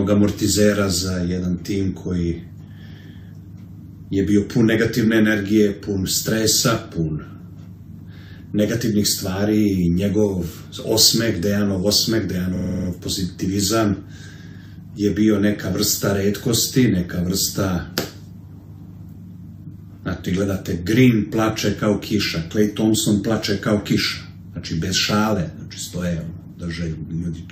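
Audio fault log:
12.55–12.88 s, repeated frames: a 46.4 ms block, likely two compressed frames, replays seven extra times. This causes a stutter and adds 325 ms.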